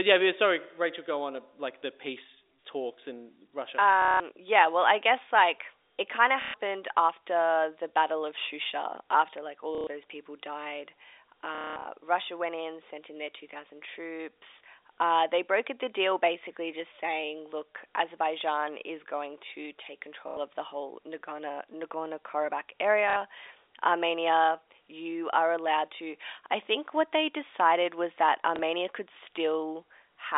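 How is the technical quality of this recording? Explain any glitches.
The speech comes through a telephone line band of roughly 300 Hz to 3.7 kHz, consistent with G.711 coding, and is interrupted seven times by dropouts.

Packet loss with the last packet repeated occurs at 4.02–4.2 s, 6.42–6.54 s, 9.75–9.87 s, 11.55–11.85 s, 20.28–20.37 s, 23.1–23.16 s and 28.56 s. Missing packets were replaced by replaying the previous one, and the repeats fall out of step with the pitch. Each run of repeats is heard as a robotic stutter that buzzes at roughly 33 Hz, which fits 30 ms packets. The longest and most broken-up patch is at 11.55 s, and the briefest is the single hiccup at 28.56 s.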